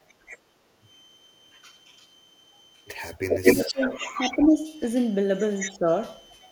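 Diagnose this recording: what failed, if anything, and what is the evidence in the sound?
A switching supply whistle runs through the whole recording, a faint steady tone wandering between 3.06 and 3.13 kHz, roughly 30 dB below the speech. This is an analogue wiring or power fault: a switching regulator's burst-mode ripple is coupling into the audio path. The small pitch drift sets it apart from a fixed digital tone or mains hum. A clock or converter spur would sit at one exact frequency, and mains hum would be low-pitched with harmonics.

The background is gated by the echo canceller twice near the start, at 0.13 to 0.25 s and at 0.58 to 0.69 s. The room sound dips by about 10 dB and then about 11 dB, for roughly a tenth of a second each time, and comes straight back. This is call processing: the canceller clamps the microphone while far-end audio plays and releases it afterwards. The drop covers only the ambience, with no silence, which tells it apart from a network dropout or packet loss.

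An echo leak appears from 3.29 to 4.49 s and again from 5.59 to 5.77 s. A copy of the speech trails the original by 218 ms. In the first stretch it is about as loud as the original, and in the second it is around 10 dB quieter. The cause is likely residual loudspeaker pickup that the far end's echo canceller failed to subtract. A single fixed delay with a varying level marks it as acoustic return, not a network repeat or duplicated buffer.

Speech is suppressed in double talk at 3.42 to 4.18 s, 4.36 to 4.68 s and 5.68 to 5.87 s, overlapping the echo stretches. The talker sinks by roughly 15, 10 and 15 dB. The likely cause is a canceller that cannot tell near-end speech from loudspeaker echo while both are active, so it attenuates everything. The loss falls only during overlap, not at random, which distinguishes it from codec dropouts or jitter-buffer concealment.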